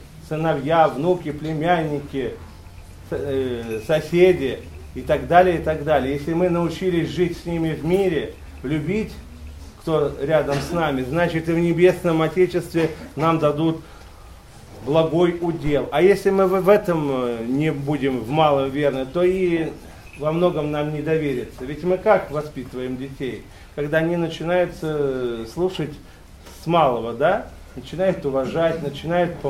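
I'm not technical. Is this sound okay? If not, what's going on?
No. There's a phantom power thump at about 15.67 s, lasting until roughly 15.83 s. It's a deep, low thud you'd hear when a mic's power supply gets switched on or off while recording, dying away in a few hundredths of a second.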